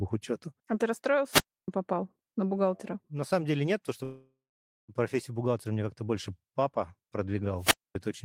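At 1.30 s the speech has a wireless microphone squelch dropout lasting until 1.68 s. The radio link from the microphone fades, and hiss swells briefly before the receiver's squelch cuts the output, leaving a hole of near silence of about 0.3 s. The voice then returns. What was said during the mute is simply lost, and the rising static just before the hole is what sets it apart from a network stall.

From 4.03 s to 4.90 s comes a call audio freeze, likely caused by packets being held up so that the jitter buffer ran dry. The last sound carries on as a fading buzz or hiss and then goes silent for about 0.5 s, filling 850 ms in all. The speech then resumes exactly where it stopped, with nothing missing, and everything after it arrives 850 ms later. There is no hiss build-up before it, as there is with a squelch mute.

A second squelch dropout runs from 7.58 s to 7.95 s, again with hiss rising ahead of a silent hole, this one about 0.24 s.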